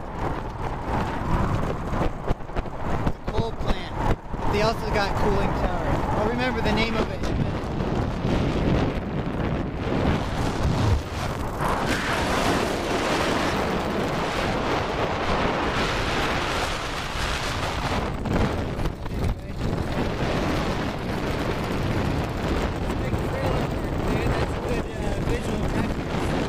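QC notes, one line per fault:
11.59–13.53 s, wrong sample rate: the sound runs 1.38 times fast and about 5.5 semitones high, which fits 32 kHz material played back at 44.1 kHz with no conversion. On a spectrogram, all components shift upward and events squeeze together in time. The waveform looks compressed.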